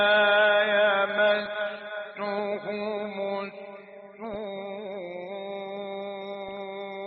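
Right from the start the whole clip has that dull, gurgly quality you get from MP2 compression, likely from a low-rate Layer II encode, with the damage plainly audible. The top end sounds switched off, and what's left has a coarse, granular edge where the surviving sub-bands are quantised with too few bits. The thinness points to something around 80 kbps.

On top of that there are three short bursts of DAB burbling: 1.46 to 1.67 s, 4.24 to 4.35 s, and 6.48 to 6.57 s. Each is a quick patch of short noise blips in single sub-bands. That's what happens when bit errors slip past the error correction into the audio data and corrupt samples and scale factors. The error rate here sounds low, a small fraction of a percent, so you get these brief clusters rather than constant mush.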